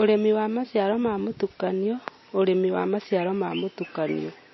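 From start to finish the speech sounds dull and watery, with nothing above 5.8 kHz, a swirling, bubbly texture around s sounds, and attacks that smear rather than land cleanly. The likely cause is MP3 compression at a low bitrate, near 24 kbps: short of bits, the encoder cut the treble at a fixed frequency and dropped weak frequency lines, which flicker on and off between frames and produce that plainly audible warbling.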